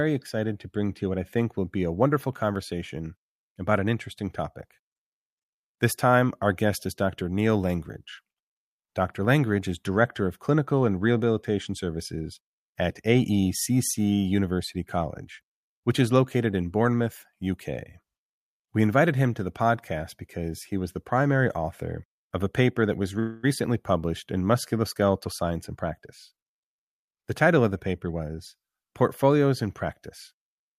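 At 23.19 s, just after "a paper that was", packets were likely held up in transit so the jitter buffer ran dry, producing a call audio freeze. The receiver stretched the last sound into a fading buzz or hiss lasting until 23.45 s, about 0.24 s, before "published in" resumes. Nothing is dropped; the speech simply picks up where it stopped, now sitting roughly a quarter of a second later than before.

From 25.27 s to 28.36 s a jitter buffer speed-up follows, as the buffer, now holding more audio than it targets, trims itself back. The receiver repeatedly cut out short pitch-period-sized slices, removing about a fifth of a second in total. The speech runs at about 107% of its normal rate over those three seconds while keeping its pitch, so the delivery sounds slightly rushed rather than higher.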